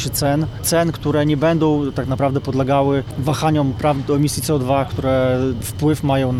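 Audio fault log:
3.11 s, gap between stream segments: the sound stops dead for about 6 ms, with hard edges on both sides, then carries on exactly where it left off. Two consecutive segments were placed slightly apart in time, and the player filled the space between them with silence. Unlike a dropout or lost packet, nothing is removed. The material on either side continues without loss, and the timeline is simply stretched by those few milliseconds of inserted silence.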